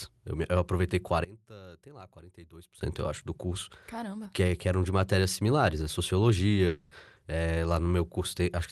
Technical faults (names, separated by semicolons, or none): one channel inverted; long network dropout